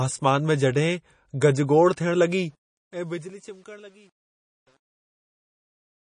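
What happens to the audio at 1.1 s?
At 1.1 s you're hearing the same thing that runs through the whole clip: plainly audible damage that sounds like MP3 compression, likely at a low rate that fits something around 32 kbps. With that few bits, the encoder drops weak frequency lines, and they flicker in and out from frame to frame. So the speech turns watery and swirly, s sounds pick up metallic chirps, and attacks smear. There's also nothing above about 9.8 kHz, which takes the top off the treble.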